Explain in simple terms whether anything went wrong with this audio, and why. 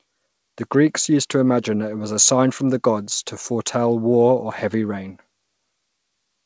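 Nothing stood out as wrong when listening to this speech, which came through an ordinary internet call line whose dulled top end, with nothing above 8 kHz, is normal for that kind of connection.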